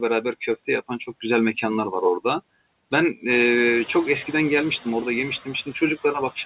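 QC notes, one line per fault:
throughout: noise suppressor artifacts. Background noise sinks in the gaps and swells back under speech, because the suppressor pulls steady-noise bands down by about 21 dB frame by frame. The room noise rises about 11 dB around midway.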